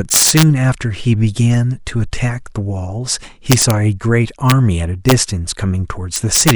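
Integer overflow strikes the speech at 0.12 to 0.43 s, 3.52 to 3.70 s, 4.50 s, 5.09 to 5.12 s and 6.16 to 6.51 s. Peaks pushed about 9, 7, 1, 1 and 8 dB past the integer limit wrap to the opposite extreme instead of being held there, so the loudest stretches burst into violent cracks, and the two 1 dB overshoots give brief snaps. Clipping would flatten those peaks into a duller buzz rather than this sharp, sign-flipping crack.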